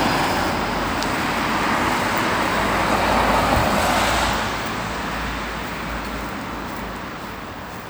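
No technical faults can be heard anywhere in the audio, and the signal stays intact and steady throughout.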